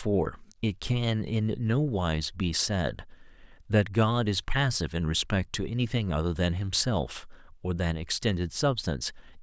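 No technical faults can be heard in the speech. There is nothing here that calls for a time or a description.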